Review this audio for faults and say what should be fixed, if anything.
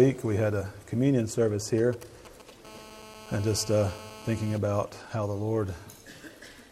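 From 1.78 to 2.51 s there are GSM signalling bursts: a galloping dit-dit-dit of short 217 Hz buzzes, roughly 20 dB under the program. A nearby 2G phone is firing short radio burst groups, and the audio circuitry is rectifying them.

Then from 2.65 to 4.58 s it settles into a steady GSM phone buzz, a hard raspy 217 Hz tone full of harmonics, about 19 dB below the signal. That's a 2G phone now transmitting at 217 bursts a second, as in a call, with the pulses demodulated into the audio path.

To prevent both, keep mobile phones well away from the rig or switched to airplane mode, and use shielded, properly grounded cabling.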